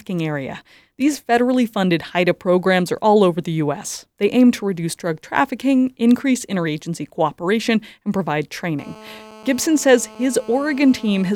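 Right after "interagency cooperation and provide", at 8.79 s, a GSM phone buzz comes in and holds steady until 11.31 s. A nearby phone on a call is bursting at 217 Hz, and the audio circuit rectifies those pulses into a raspy, harmonic-rich buzz sitting about 23 dB under the speech.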